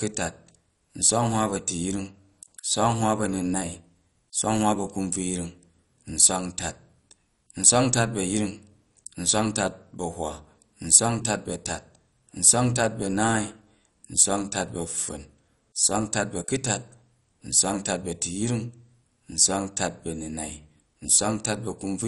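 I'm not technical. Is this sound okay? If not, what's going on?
No. Throughout, the speech sounds dull and gurgly, with nothing above about 11.3 kHz, likely from MP2 compression squeezed too hard, coarsening and muting upper bands.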